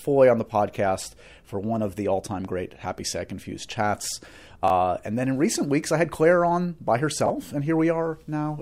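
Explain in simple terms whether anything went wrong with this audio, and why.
Chunks out of order: short 20 ms pieces of audio arrived late and played after later pieces, causing brief jumbled moments at 4.64–4.70 s and 7.26–7.30 s.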